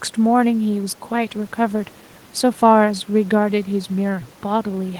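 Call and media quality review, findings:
No faults to flag here; the speech comes through without any problem worth a ticket.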